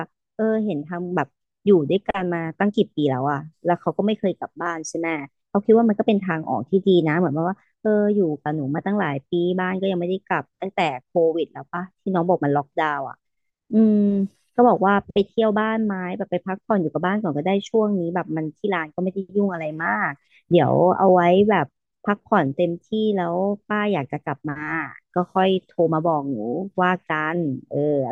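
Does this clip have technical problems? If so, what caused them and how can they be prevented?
No, nothing in this speech recording points to a technical fault, so there is no cause to trace and nothing to prevent.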